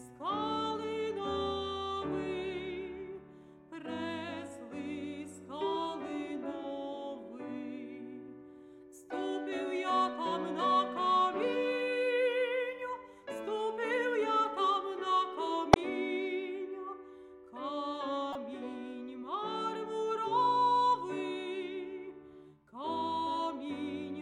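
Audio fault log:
15.73–15.76 s and 18.33–18.36 s, corrupt frame decoded: damaged bits in about two compressed frames at each spot were decoded anyway, so misread gains and codes put energy at wrong frequencies. This is heard as short chirps, squeaks, blips or bursts of noise, the first loud, peaking near -10 dBFS, the second softer, near -25 dBFS.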